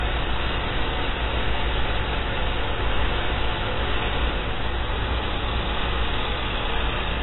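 A recording of sounds, heard with heavy AAC compression damage across its whole length. Nothing reaches above about 3.9 kHz, and the remaining band sounds smeared, with a warbling, fizzy grain on sustained sounds. That grain is what separates it from a simple low-pass filter, which would dull the top but leave the rest clean. The likely cause is AAC-LC coding at a very low rate, consistent with roughly 16 kbps.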